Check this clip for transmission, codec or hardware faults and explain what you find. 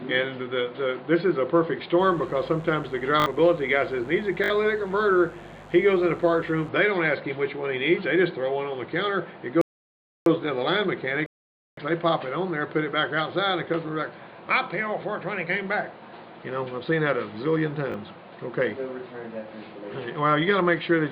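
Three kinds of fault are audible: mains buzz, repeated buffers, and rebuffering stalls.

From 2.0 to 6.7 s a steady, raspy mains buzz sits about 25 dB below the signal. Sharp switching spikes at twice the 50 Hz mains rate spread harmonics well up into the kilohertz range, giving a grating edge rather than a pure hum.

Repeated buffers occur at 3.20 to 3.26 s and 4.44 to 4.50 s, each a short fragment played three extra times. A single extra play occurs at 17.92 s. Late data forced replay of the last block, which fits a 20 ms buffer. The hard joins give a brief buzzy stutter, and roughly 70 ms of audio is lost at each of the first two.

Rebuffering stalls cut the sound to silence from 9.61 to 10.26 s and from 11.26 to 11.77 s. The player exhausted its downloaded audio and waited for more. Playback resumes exactly where it stopped, adding about 0.65 s and 0.51 s without losing material.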